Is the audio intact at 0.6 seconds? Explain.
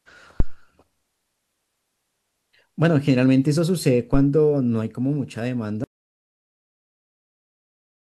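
No. A deep low thump runs from about 0.40 to 0.59 s, dying away over roughly 43 ms right at that moment. This is a phantom power thump: a supply switched on or off on the live input sent a voltage step through the coupling capacitors.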